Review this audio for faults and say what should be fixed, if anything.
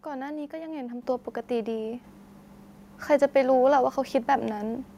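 You'll hear the microphone volume stepped up twice, at 1.02 s by about 7 dB and at 2.04 s by about 4 dB. The call software judged the mic too quiet and raised its input gain, so voice and background jump together. To prevent it, disable automatic mic gain adjustment and set a fixed input level.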